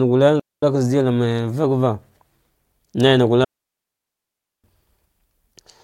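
At 0.40 s and again from 3.44 to 4.64 s the speech falls into a digital wireless dropout. The receiver, short of usable data, mutes with a quick fade for 0.23 s and then 1.19 s. Unlike an analogue dropout, the holes are clean silence with no hiss or noise burst.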